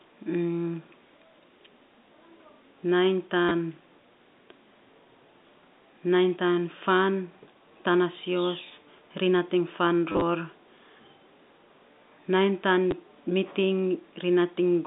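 A speech clip over a narrow telephone-style line, with packet loss and the last packet repeated: short robotic stutters at 3.49–3.51 s and 10.12–10.22 s and a small blip at 12.91 s, where chunks of audio are repeated, which fits roughly 10 ms packets.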